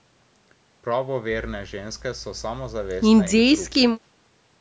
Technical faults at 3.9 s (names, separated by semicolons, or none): none